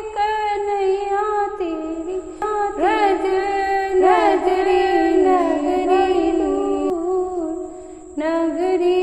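A slower second capture path likely doubled the audio track from 2.42 to 6.90 s: an equally loud copy trails about one second behind, starting and stopping abruptly.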